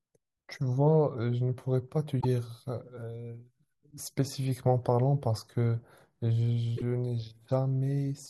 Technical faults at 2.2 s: broken MP3 bit reservoir

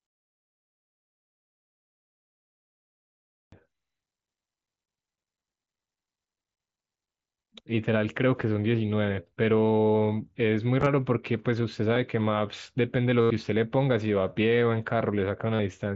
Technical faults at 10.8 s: concealed Bluetooth headset packet loss

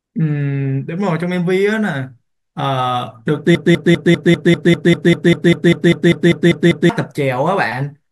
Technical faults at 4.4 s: broken-record loop

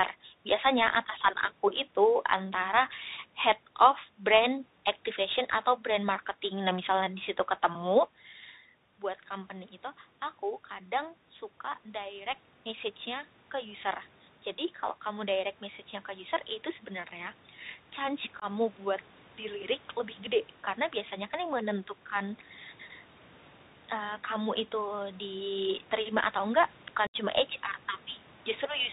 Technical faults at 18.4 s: Bluetooth CVSD headset codec; automatic gain rising; unconcealed Bluetooth headset packet loss

